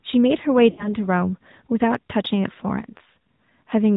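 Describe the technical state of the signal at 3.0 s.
A brief dip and warble in the speech from 2.98 to 3.01 s is a case of lost AMR speech frames. The decoder bridged what sounds like a single missing 20 ms frame by reusing the previous pitch and vocal-tract settings at reduced gain.

Around this, the speech is band-limited to 4 kHz, buzzy and somewhat synthetic. That is the AMR narrowband mobile codec at 10.2 kbps, which rebuilds speech from a vocal-tract model driven by sparse pulses.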